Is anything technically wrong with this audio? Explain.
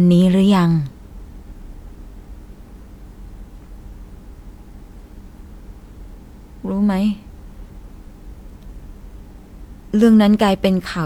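No, nothing is technically wrong with this audio.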